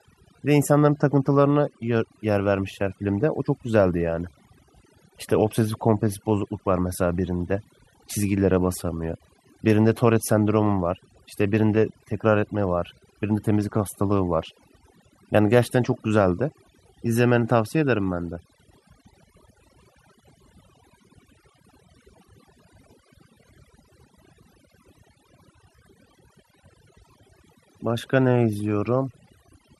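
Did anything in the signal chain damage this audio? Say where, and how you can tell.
Yes. In call processing, overdone noise removal is switching off spectral bands near its noise estimate across the whole clip, leaving twinkling specks in near-silence.

On the network path there is clock drift between sender and receiver. The sender's clock runs roughly 2 % slow, so the receiver's jitter buffer keeps draining throughout.

Repeated timing corrections run from 0.36 to 29.67 s. The receiver repeats short pieces unevenly, stretching playback to about 98 % speed and adding roughly half a second, heard as faint hiccups.

Scattered short gaps come from packets lost or late on the network, between 19.53 and 22.27 s and again between 27.28 and 29.15 s. Each tiny hole, at most about 10 ms, is patched by continuing the sound, leaving brief ticks or smears.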